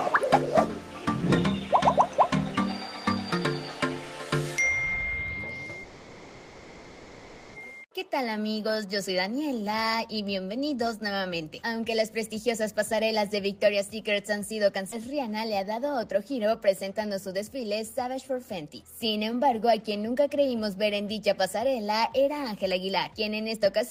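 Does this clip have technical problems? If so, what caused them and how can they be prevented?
Yes. From 5.83 to 7.56 s the sound stretches into a fading buzz for 1.71 s, then resumes intact; this is a call audio freeze, likely from delayed packets draining the jitter buffer. A steadier network path or a larger buffer would prevent it.

At 14.91 to 14.94 s the audio jumps forward, losing around 0.4 s with an almost seamless join. This skip ahead comes from a stretch being dropped while later audio already waited. Reducing packet loss and buffer overflow would prevent it.

From 15.22 to 17.55 s, and again from 22.54 to 23.66 s, the sound runs faster at unchanged pitch, about 6% and then 4% fast. This jitter buffer speed-up comes from trimming short pitch-period slices, roughly 150 ms and then 50 ms in total, to shed excess delay. Smoother packet delivery would avoid the backlog that triggers it.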